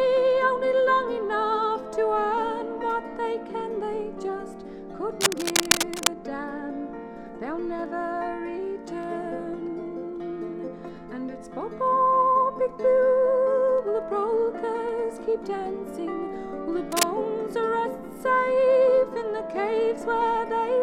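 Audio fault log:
5.21–6.08 s, cable scratch noise: a dense, ragged burst of scratching sits right on top of the sound, about as loud as the sound itself, most likely a worn cable or connector being moved so its contact keeps making and breaking.
16.92–17.08 s, cable scratch noise: a much shorter flick of the same rustle, at a similar level.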